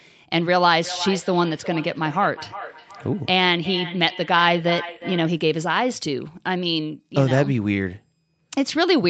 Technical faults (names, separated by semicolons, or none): feedback echo between two devices